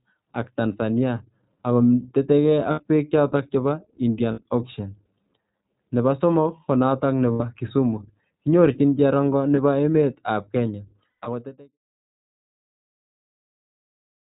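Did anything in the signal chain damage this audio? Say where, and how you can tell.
Yes. The damage is at the codec stage, across the whole speech clip. Nothing above 4 kHz survives, and the speech sounds rough and slightly synthetic. That is the iLBC codec, plainly audible. The sound fits its 15.2 kbps mode with 20 ms frames.

The network stage adds lost iLBC frames. The gaps are at 2.72–2.80 s, between "ako tetekei" and "beek choto", and at 4.32–4.41 s, 7.32–7.41 s, and 9.56–9.59 s after "kinyorchini cherongo". A scattered burst falls at 11.10–11.28 s, with its longest run about 100 ms. Each gap sounds like a held, buzzy vowel. The decoder is repeating the last pitch cycle mixed with noise. The voice returns almost at once.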